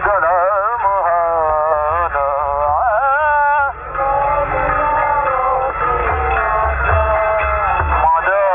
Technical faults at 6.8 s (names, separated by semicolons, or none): none